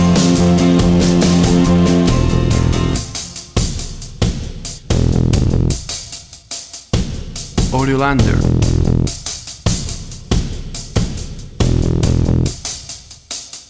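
At about 4.78 to 4.88 s, a skip ahead drops roughly 0.7 s of audio. Playback jumps straight forward, leaving an abrupt splice in the waveform and a hard vertical seam on the spectrogram. From 5.35 to 6.44 s, a jitter buffer speed-up runs the audio about 8% fast, trimming around 100 ms in small pitch-period cuts. The sound is hurried but keeps its pitch, and the spectrogram's harmonic patterns look slightly compressed in time, all below the call path's 8 kHz ceiling.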